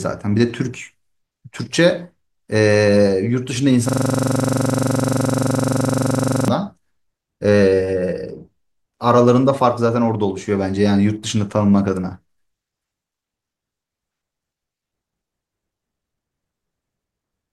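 From 3.89 to 6.48 s the speech locks into a system hang loop: the system stalled while playback kept cycling one 42.67 ms buffer, fitting 2048 samples, about 60 times. It sounds like a 23.4 Hz buzz, and the waveform and spectrogram show identical blocks repeating every 42.67 ms.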